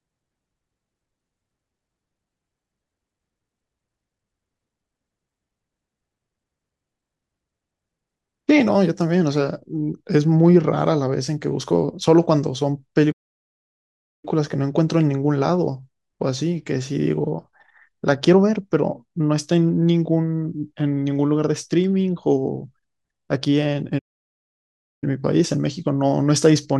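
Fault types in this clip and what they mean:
playback stall: the speech cuts to silence mid-flow for about 1.1 s at 13.12 s and 1.0 s at 23.98 s, likely the player running dry of data.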